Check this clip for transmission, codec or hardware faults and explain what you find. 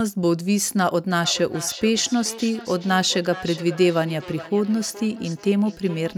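There is one fault: feedback echo between two devices. It starts at 1.24 s and runs to the end of the speech. Each word returns roughly every 0.4 s, with the loudest repeat about 16 dB below the direct speech. Two devices in the same room are on the call. One plays out what the other's microphone sent, and that microphone picks it up again. Each device's echo canceller removes only its own playback, so the loop survives and the speech comes round again, thinner and ringing.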